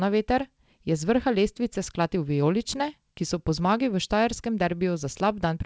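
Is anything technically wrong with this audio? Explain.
Yes, there's a timing problem. Clock drift between sender and receiver runs the whole way through: the sender's clock is about 5% fast, so the jitter buffer keeps overfilling and has to shed audio. That shedding shows up as repeated timing corrections from 0.12 to 5.54 s. Small chunks get cut at uneven intervals, playing back around 105% speed, so at most you'd hear slight hiccups and an unsteady, hurried tempo. The call path is G.722, so nothing above 8 kHz.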